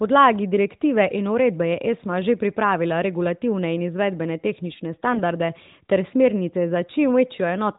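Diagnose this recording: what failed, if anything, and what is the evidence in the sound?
From 5.12 to 5.22 s the speech turns briefly hoarse and scratchy, with a gargly roughness, while its pitch and level stay roughly steady. This points to AMR bit errors at the network stage. Over a weak radio link a few percent of the less-protected bits in the narrowband AMR stream arrived flipped, yet the checksum on the critical bits still passed. The decoder therefore rebuilt those 100 ms, about five 20 ms frames, with pulses in the wrong places and slightly wrong pitch, gain and spectral values.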